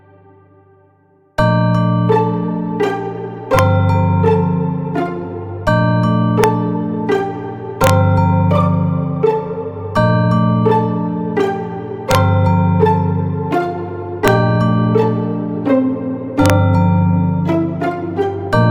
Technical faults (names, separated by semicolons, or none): integer overflow